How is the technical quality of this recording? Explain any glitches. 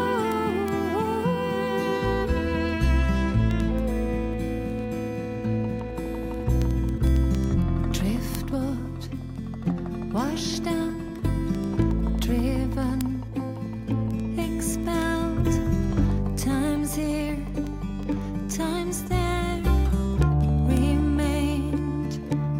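The recording is marred by word clock ticks running from 0.14 s to the end, roughly ten per second, heard as sharp ticks of uneven strength. An unlocked receiver slips one sample each time against a clock mismatch of roughly 300 ppm. On a spectrogram they appear as evenly spaced thin vertical lines, and as spikes on the waveform.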